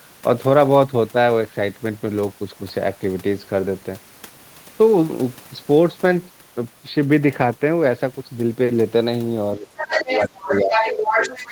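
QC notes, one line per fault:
9.57 to 11.31 s, speech suppressed in double talk: the talker's level sinks by roughly 15 dB in uneven dips over about a second and a half, likely because the echo canceller mistook the overlap for echo and turned everything down.
9.76 to 10.28 s and 10.44 s to the end, other side's voice leaking through: a second voice sits in the microphone, first a little below the talker, then about as loud, likely loudspeaker playback the echo canceller failed to remove.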